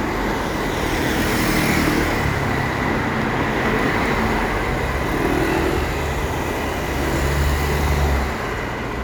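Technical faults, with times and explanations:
No technical faults detected in this recording of sounds.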